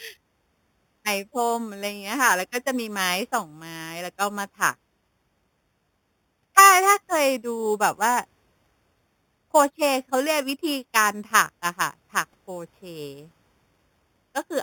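From start to finish the speech carries imaging from sample-and-hold upsampling. Each sample was simply repeated when the rate was raised, which fits an original 8 kHz rate, so the band up to 4 kHz is mirrored into 4 to 8 kHz at about 11 dB below the signal, with further copies around higher multiples. It sounds like a bright metallic fizz riding on every syllable. A spectrogram shows flipped formant patterns stacked above 4 kHz, and the waveform zoomed in shows a staircase.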